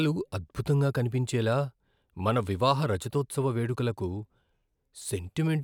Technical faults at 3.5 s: sample clock jitter

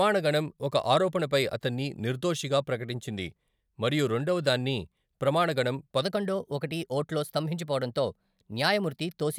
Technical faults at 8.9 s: section at the wrong speed

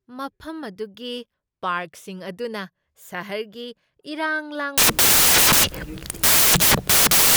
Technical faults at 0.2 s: none

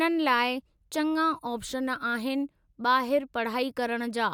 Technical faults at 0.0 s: none

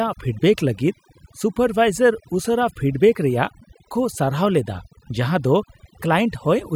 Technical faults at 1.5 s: overdone noise removal

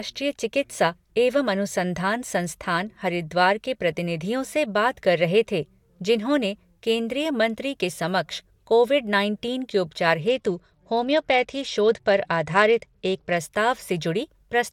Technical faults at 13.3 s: Bluetooth SBC bit pool drop

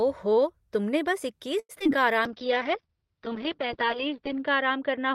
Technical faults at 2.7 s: call bitrate drop; jitter buffer slow-down

